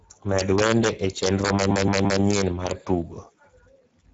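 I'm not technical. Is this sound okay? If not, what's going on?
No. The whole recording has gone through the Speex codec, an older speech compressor used in internet calls and game chat. It was squeezed hard here, so the voice sounds hoarse and grainy. The highest, crispest sounds are missing.

There is also an integer overflow from about 0.39 to 2.71 seconds. When the loudest moments go past the biggest number the system can hold, they flip to the opposite extreme. Each one becomes a harsh, violent crack, sharper than ordinary distortion.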